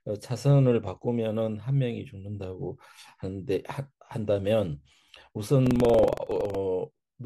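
From 5.62 to 6.55 s the speech takes on a coarse, robotic rattle at about 21.5 Hz, present only while sound is playing. This is buffer tearing. The writing program and the playback hardware have drifted so their positions cross within each buffer period. A small slice of every buffer, a few percent, still holds audio from roughly a tenth of a second earlier, with hard joins on both sides. The repeat rate fits a 2048-sample buffer.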